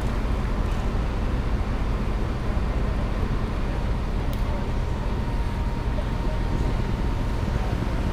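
From 6.12 s to 8.10 s there's a train of clicks, around thirty uneven pops at about 12.2 per second, peaking roughly 10 dB over the sound, likely interference.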